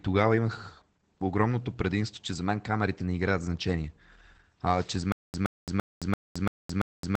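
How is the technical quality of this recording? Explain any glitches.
Technical quality is held back by two problems: low-rate voice compression across the whole clip and a stuttering playback fault that takes over the last couple of seconds.

Opus voice compression runs the whole way through, and the damage is plainly audible. Nothing comes through above about 8.6 kHz, so the top of the sound is shaved off and the speech has a dull, muffled quality. That cutoff fits a wideband SILK setup, the linear-prediction coder Opus uses for voice. The coarse excitation coding gives the voice a hoarse, slightly synthetic edge, all of which points to a low bitrate, probably around 12 kbps.

The stutter with silent gaps starts at 5.12 s and runs to the end. A short chunk of about 121 ms plays, then about 218 ms of dead digital silence, and the same chunk comes back every 339 ms or so, six times over. 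It sounds mechanical and evenly paced. The likely cause is a stalled stream or player that replays its last buffered fragment on each retry and then runs dry. Whatever should have played after 5.12 s never comes through.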